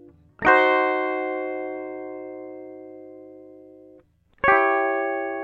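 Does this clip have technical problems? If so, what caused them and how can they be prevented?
No, this music clip has no technical problems.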